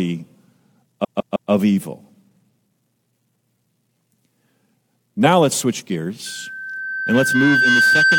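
At 1.03 s the speech begins to stutter. This is a repeated frames fault. A block of compressed audio about 157 ms long was sent or stored more than once, so the decoder played it three extra times. That block fits a run of six frames. The stutter lasts until 1.50 s. The clip is about 470 ms longer as a result.

Right after "let's switch", at 6.26 s, a loudspeaker feedback squeal begins. A microphone is picking up the loudspeaker it feeds. At 1.6 kHz the loop gain rises above one, so that frequency keeps feeding itself and grows. It starts faint and swells into a steady whistle over about a second and a half. It ends up somewhat louder than the speech and does not stop before the end of the clip.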